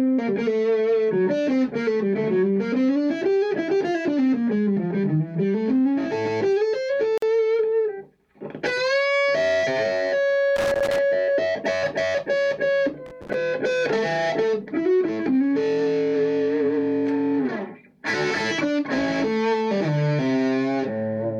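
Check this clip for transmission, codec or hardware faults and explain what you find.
Two kinds of fault turn up: a gap at a join of encoded pieces and loose connector crackle.

At 7.18 s a gap at a join of encoded pieces cuts a silence of about 46 ms into otherwise continuous sound, ending at 7.22 s. Each separately encoded piece brings its own start-up delay and padded final frame, and left untrimmed they become a hole at the seam. The edges are abrupt but slightly smeared, and the sound resumes exactly where it stopped. That clean, single dropout with nothing lost separates it from a packet-loss gap or a connector fault.

Loose connector crackle appears from 10.56 to 10.98 s and again from 13.06 to 13.34 s. A worn or dirty contact is making and breaking rapidly as it shifts, chopping the signal on and off, with pops where any DC on the line jumps. It sounds like an irregular burst of scratching and crackle. 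Unlike the join gap, it is not a clean silence but a ragged, uneven stretch of roughly a quarter to half a second. Each burst keeps its own irregular texture rather than a steady rhythm.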